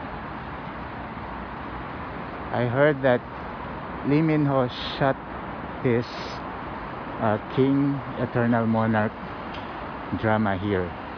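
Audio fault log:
Nothing to flag here; I listened all the way along and didn't hear anything go wrong with the audio at any point.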